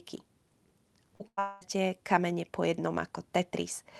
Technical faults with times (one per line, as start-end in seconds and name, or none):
1.15-1.22 short concealed packet loss
1.28-1.39 burst of packet loss
1.39-1.63 long network dropout